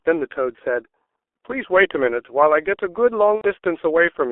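The whole clip carries heavy G.723.1 codec damage. The speech is squeezed into a narrow telephone band, roughly 300 Hz to 3.4 kHz. At about 6.3 kbit/s, the coder's long frames smear consonants. Voices sound muffled and hoarse throughout.

At 3.35 s, VoIP packet loss is concealed by the speech codec until 3.46 s. About 90 ms of audio is missing. The decoder fills the gap by repeating its last pitch and filter. The result is a buzzy tone or coloured noise that fades.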